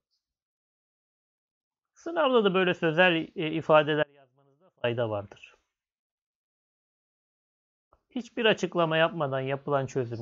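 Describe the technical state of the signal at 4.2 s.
An audio dropout to a faint residue covers 4.2 s, running from 4.03 to 4.84 s, about 0.8 s in all. The wanted signal was likely lost upstream while the path after the break stayed live, so the gap is not silent: only a faint leak of the sound remains, roughly 35 dB below its normal level. The cut-out and the return are both abrupt, with none of the gradual shape of a pause or a fade.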